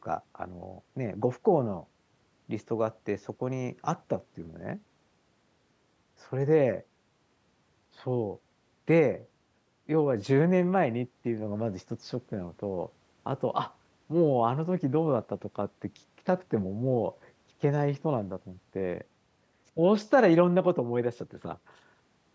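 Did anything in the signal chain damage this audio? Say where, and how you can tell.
No, nothing in the chain damaged this speech; it simply went through a call's microphone processing, which leaves nothing above 8 kHz and trims the lowest bass, and that's just how that stage normally behaves.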